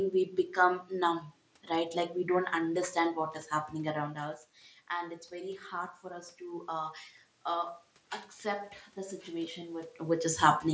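A speech clip carried over a wideband Bluetooth headset link, band-limited to 8 kHz, in which the automatic gain control starts rising after "what is happening". At around 4 s the talker's level at the microphone falls by about 17 dB. From 3.98 to 7.1 s the gain control slowly adds about 4 dB, so the voice and the room noise swell together until "uh accept the situation".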